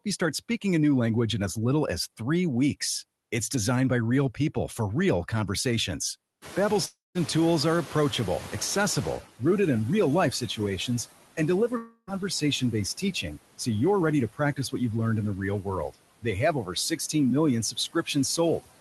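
Noise suppressor artifacts run through the whole recording: gaps sink by about 17 dB, unlike the even hiss of untreated room noise.

After "people for real conversations" the room noise jumps by about 23 dB around 6.5 s. From 6.41 to 9.23 s the noise suppressor is catching up, letting the louder noise through with only about 12 dB of reduction. It settles over roughly 2.8 s, before "rooted in". This is a gradual sinking, not a sudden gate.

Inside that stretch, at 6.85 to 7.18 s, and again at 11.77 to 12.10 s, about 0.3 s of audio is missing. These are long network dropouts, likely caused by lost packets. A fading buzz or hiss fills each gap, followed by 180 ms and 30 ms of silence respectively. The lost sound never returns, which tells these apart from suppression.

Speech cut by the noise suppressor follows at 11.37 to 13.67 s, before "you're ready to". It recurs at 14.33 to 14.74 s, before "you've learned in", then at 15.63 to 17.15 s, and from 17.72 s to the end. 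Syllables drop by about 14 to 18 dB and sound swallowed, but they remain faintly present, without a buzz.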